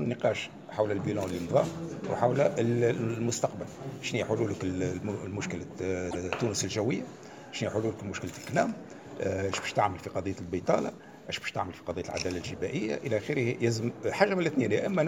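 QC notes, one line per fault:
6.10–6.21 s, repeated frames: a 104.5 ms stretch of sound plays twice in a row, heard as a brief stutter, which fits a run of four compressed frames being sent again and decoded a second time. The repeat lengthens the clip by 104.5 ms.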